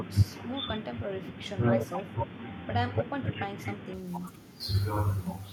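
From 0 to 3.94 s the speech is dull and boxy, with a new noise floor roughly 30 dB down and a level shift of around 5 dB. That points to an input switched to a poorer device, likely. Unlike a plain filter, noise and level also change, clearing abruptly at 3.94 s without any gap.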